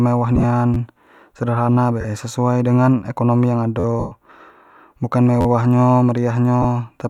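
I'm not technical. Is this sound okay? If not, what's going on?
No, the speech has two kinds of wireless playback fault.

Lost LE Audio frames: at 0.36–0.44, 2.01–2.05, 3.99–4.12 and 6.62–6.65 s, pieces of audio never arrived over Bluetooth. The receiver filled each gap with a hissy copy of the last sound, so the speech smears into noise. The longest gap, at 3.99 s, fades toward silence.

Repeated buffer: at 0.74–0.77, 3.80–3.84 and 5.41–5.46 s, new audio came late, so the device replayed its last tiny slice, about 12 ms long. This happens twice at 0.74 s and four times at the others, heard as a quick buzzy stutter.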